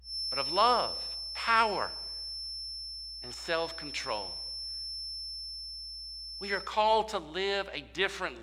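A feedback whistle runs from 0.0 s to 6.74 s: a thin, steady tone at 5.3 kHz sits behind the speech, roughly 10 dB below it, swelling and fading slowly in level. The likely cause is a loudspeaker-to-microphone loop held just at the edge of feedback, where the gain around the loop at that one frequency is high enough to keep it ringing but not enough for it to build into a full howl.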